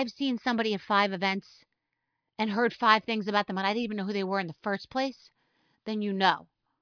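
A speech recording with no technical faults audible anywhere in the signal.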